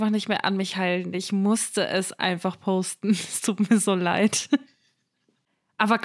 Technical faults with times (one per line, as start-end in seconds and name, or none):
none